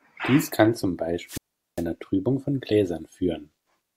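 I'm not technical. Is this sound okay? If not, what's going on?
No. From 1.26 to 1.85 s there is a wireless microphone squelch dropout: the radio signal weakens, hiss rises, then the receiver mutes the speech for about 0.4 s.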